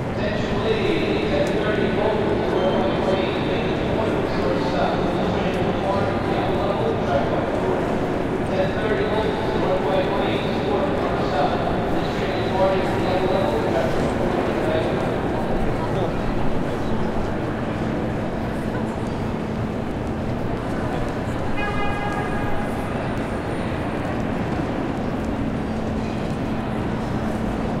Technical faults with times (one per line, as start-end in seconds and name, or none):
none